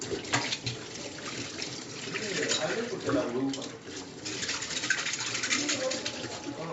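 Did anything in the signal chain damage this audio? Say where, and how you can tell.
No, the signal chain left no damage: the sounds arrive intact through the call's microphone processing and its WebRTC codec path, with content ending at 8 kHz as that call chain's normal bandwidth limit would produce.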